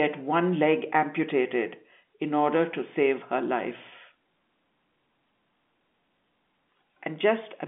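No faults found; the speech sits in a 150 Hz to 3.5 kHz band with nothing above 3.7 kHz, consistent with G.711 A-law telephone coding.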